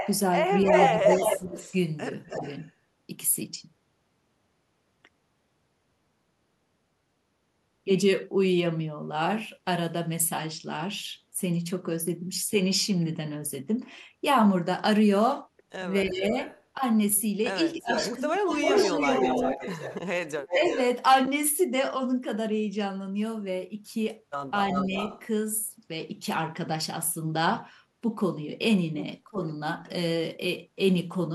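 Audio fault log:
0.00–2.72 s, 16.41–20.78 s, 24.69–25.22 s: echo leak. A delayed copy of the speech trails it by 0.30 s, 0.34 s and 0.36 s. The copy is about as loud as the original in the first two spans and slightly quieter in the last, most likely because a loudspeaker echo slipped past the far end's echo canceller. On a spectrogram the harmonic striations repeat, shifted right by that delay.
0.64–2.41 s, 16.04–20.70 s, 24.89–24.96 s, 29.25–29.39 s: speech suppressed in double talk. The talker's level dips in bursts, likely because the canceller ducked everything while both sides overlapped. The first two spans lose roughly 15 dB, for about a third of a second and about a second in total. The dip at 24.9 s is slight, and the one at 29.3 s is deep, around 20 dB. On the waveform these show as notches in the envelope.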